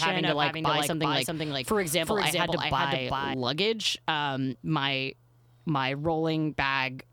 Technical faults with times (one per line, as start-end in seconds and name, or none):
0.00-3.34 doubled audio track